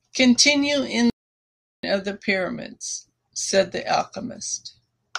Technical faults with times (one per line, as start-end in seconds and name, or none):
1.10-1.83 playback stall